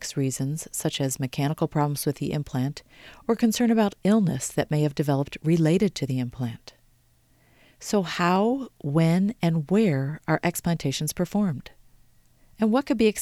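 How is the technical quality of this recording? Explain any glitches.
The speech carries one recurring glitch, starting just after "reasons such". Clock drift buffer slips from 1.13 s to 13.17 s, about ten of them at a steady 1.21 s spacing. They are likely caused by two device clocks disagreeing by roughly 150 ppm, so a handful of samples is dropped or repeated each time, heard as a regular click.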